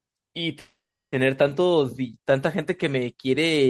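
A call audio freeze runs from 0.59 to 1.14 s. The speech stops and the last sound is drawn out into a fading buzz or hiss, which falls to silence for roughly 370 ms before the speech resumes exactly where it broke off. The likely cause is packets held up in transit until the jitter buffer ran dry. About 530 ms was filled in, nothing was lost, and everything after the freeze arrives 530 ms later than it would have.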